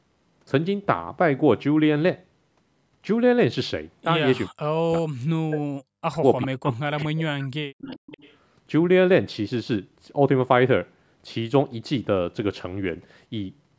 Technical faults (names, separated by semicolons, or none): speech suppressed in double talk; echo leak